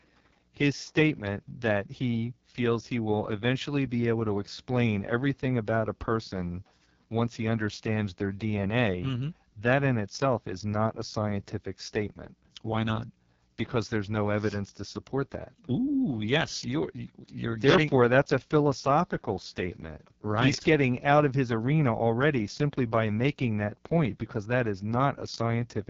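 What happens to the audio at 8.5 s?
At 8.5 s the speech is passing through the AMR wideband (HD Voice) codec, as it does for the whole clip, and at a very low rate. The codec models the voice as pulses driving a vocal tract filter up to 6.4 kHz and fills the band above with shaped noise. At a rate this low, which fits the codec's 6.6 kbit/s mode, the result sounds heavily rough and raspy, with nothing above 7.5 kHz.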